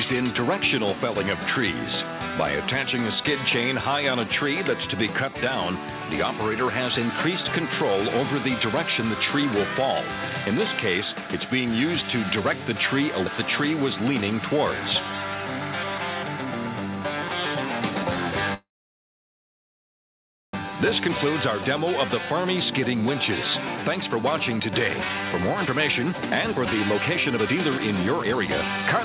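Incoming packets were likely held up in transit around 18.54 s, so the jitter buffer ran dry. A call audio freeze follows: the last sound carries on only briefly before fading, then about 1.9 s of silence until 20.55 s, when the audio resumes where it stopped with nothing lost.

Because that stall added roughly 2 s of delay, the jitter buffer then holds too much audio and trims it. From 20.77 s to the end at 29.04 s, the jitter buffer speed-up repeatedly cuts out tiny pitch-period slices, about a second in total. Playback runs at 114% speed at unchanged pitch, sounding hurried. Throughout, nothing is heard above 4 kHz, which fits a narrowband G.711 call path.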